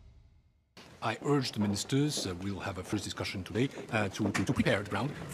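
From 3.48 s to the end, the audio suddenly turns rushed, running at about 1.93 times its earlier pace while the pitch stays put. This is a time-stretched section, likely squeezed by software that drops short pieces to preserve pitch.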